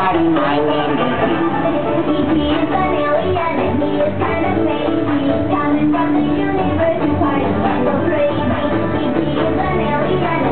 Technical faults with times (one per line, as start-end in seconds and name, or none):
none